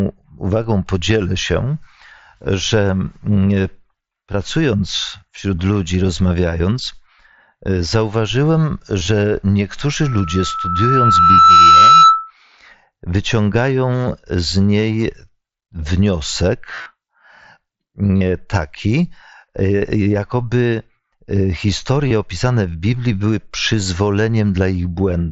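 A speech recording carried over a Bluetooth headset link shows concealed Bluetooth headset packet loss at 0.64 s (just before "podzielę się"), 9.00–9.07 s, 16.75–16.86 s, 18.17–18.21 s and 22.08–22.11 s (just before "opisane w"). Lost packets, consistent with 7.5 ms mSBC frames, were filled by repeating a matching slice of the preceding waveform. The single drop at 0.64 s is nearly inaudible. The later gaps of roughly 30 to 75 ms produce brief buzzy, held tones and a slight warble as speech resumes. This distinguishes them from plain dropouts, which would cut to silence or leave clicks. Between 10.03 and 12.31 s a loudspeaker feedback squeal develops: a single tone at 1.3 kHz that swells on its own over about one and a half seconds until it sits roughly 10 dB above the speech. The loudspeaker output is being picked up by the microphone feeding it, and the loop gain exceeds unity at that frequency. 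The steady growth from nothing and the single pitch separate it from hum or steady electrical interference, which would start at full level. Throughout the clip the mSBC headset codec caps the audio near 8 kHz and adds faint grain on louder syllables.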